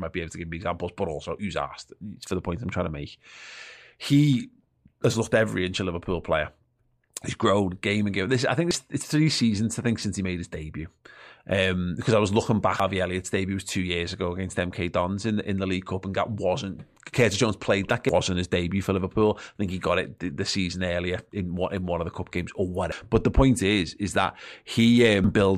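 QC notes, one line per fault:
8.71, 12.80, 18.09, 22.92 and 25.24 s: damaged data in a compressed stream. There are five short disturbances, right after "I think", right after "I was looking back", between "played that" and "his debut for", and two more near the end. Each time the decoder hits corrupted frames, loses sync and skips forward to the next good frame header, so you get a chirp, squawk, click or short hole.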